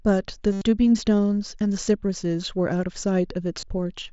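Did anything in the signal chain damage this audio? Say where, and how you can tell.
Yes, concealed Bluetooth headset packet loss on the radio link: from 0.52 to 0.61 s the gap is filled with a looped, buzzy tone, and it briefly recurs at 3.60 s.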